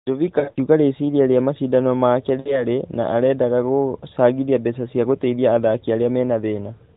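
At 0.40 to 0.58 s the speech breaks up with lost AMR speech frames. About 100 ms is lost over 160 ms, in runs up to 40 ms. The decoder repeats old settings at falling gain, so the sound warbles and dips. At 2.40 to 2.67 s, 60 ms more is lost.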